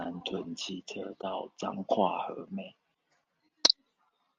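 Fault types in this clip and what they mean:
Channel delay (comb filtering): From about 0.72 s to the end of the speech, one channel arrives a tiny fraction of a millisecond after the other, a lag of only a couple of samples. When the two are summed to mono, the shared sound cancels at evenly spaced frequencies. With so short a lag, the first notch lands high, around 10 kHz. The top end of the speech loses its air and sounds dull.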